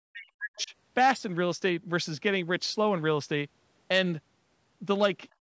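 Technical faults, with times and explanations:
0.00 to 0.73 s, speech suppressed in double talk: the speech at the start is pulled down hard, by as much as roughly 40 dB at its deepest, for most of this span, so it sounds ducked. The likely cause is an echo canceller that, with both ends talking at once, could not tell the local talker from loudspeaker echo and attenuated the microphone signal wholesale instead of removing only the echo.
0.56 to 0.64 s, other side's voice leaking through: a brief, faint second voice is audible underneath, around 30 dB below the main speech, lasting just under a tenth of a second. This is likely residual far-end audio from the loudspeaker that the echo canceller failed to subtract from the microphone feed. It falls inside the double-talk section, where the canceller's estimate of the echo path is least reliable.
5.32 to 5.41 s, background gated by the echo canceller: in the last tenth of a second or so the room tone drops by about 19 dB and stays down to the end. 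The canceller has clamped the microphone while loudspeaker output was present, so the background noise floor vanishes abruptly instead of continuing. Above 8 kHz the band is empty throughout, as expected from the call's microphone path.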